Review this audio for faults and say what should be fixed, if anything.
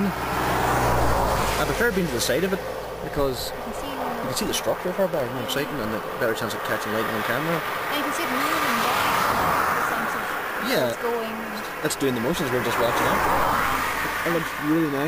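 Periodic USB or driver dropouts from 3.22 to 6.86 s. Every 0.064 s, about half a millisecond drops to silence, giving regular ticks. Stop background tasks from blocking the USB bus or audio driver.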